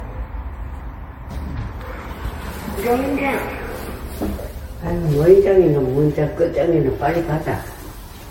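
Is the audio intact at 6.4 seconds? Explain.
No. Generation loss runs through the whole clip, including 6.4 s. The sound was likely pushed through lossy MP3 coding around seven times, each pass requantising on a shifted frame grid so noise and spectral holes pile up. It sounds swirly, hollow and smeared, with blurred attacks and nothing above 16.6 kHz, more degraded than a single encode at roughly 60 kbit/s would explain.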